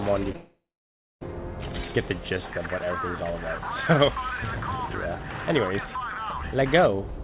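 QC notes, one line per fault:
0.32–0.36 s, short concealed packet loss: about 20 ms never arrived and was patched by extending the preceding sound, heard as a brief smear; the spectrogram shows a smoothed, slightly blurred slice.
0.36–1.23 s, long network dropout: the last sound carries on as a fading buzz or hiss, then about 0.6 s of silence before audio resumes, likely after the network stalled; the waveform goes flat and the spectrogram, already empty above 4 kHz, turns blank.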